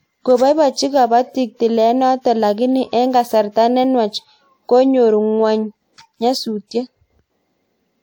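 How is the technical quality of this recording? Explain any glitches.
One codec glitch stands out. Pre-echo at 2.21 to 2.25 s, just before "lakini eng kasarta": a sharp speech onset sits late in a transform block, so noise sized for it leaks into the preceding 37 ms as a short hiss and softens the attack.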